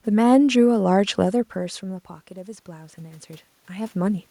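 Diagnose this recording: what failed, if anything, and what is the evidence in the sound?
Automatic gain rising, in the call processing stage. The input falls by about 16 dB after the talker moves back near 1.5 s. From 1.8 to 4.26 s the gain control lifts level by about 6 dB. Room noise swells with the voice, so this is gain, not movement.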